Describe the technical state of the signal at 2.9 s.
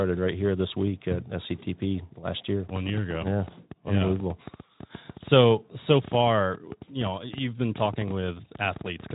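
At 2.9 s a train of clicks is running. It starts at 2.69 s, just after "last year", and lasts to 9.11 s. About 9.4 similar pulses per second arrive at uneven spacing, some 70 in all, peaking about 5 dB above the speech. The likely cause is interference or a faulty connection. Unlike Speex coding roughness, which stays lightly hoarse below 3.8 kHz, these are discrete ticks that continue through pauses.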